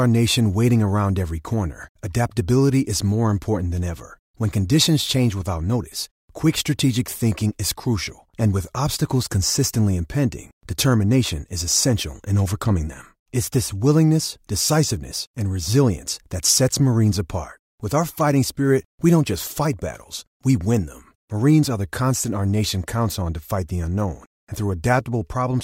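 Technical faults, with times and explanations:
No technical faults are present in this speech clip.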